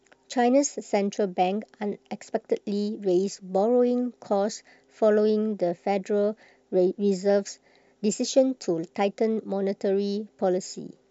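No technical faults can be heard anywhere in this recording.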